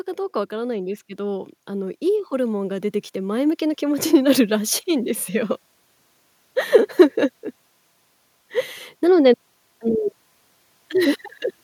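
A speech recording with automatic gain rising: from about 0.49 s to 5.61 s the level creeps up by roughly 10 dB. The voice and the background noise swell together over those five seconds, which tells you it's the AGC deciding the input was too quiet and slowly winding up its gain, rather than the talker getting louder or closer.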